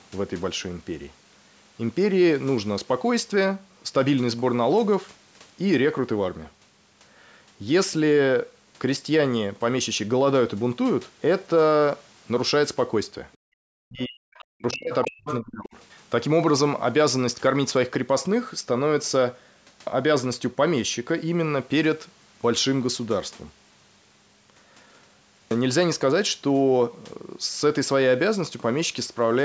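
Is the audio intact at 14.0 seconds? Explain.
No. From 13.85 to 15.76 s, the speech dips sharply in a pattern that is likely speech suppressed in double talk. An echo canceller turning down the talker drops it by around 40 dB. Between 14.0 and 14.05 s, a faint scrap of the other side's voice leaks through, well below the speech. Residual loudspeaker echo likely escaped cancellation.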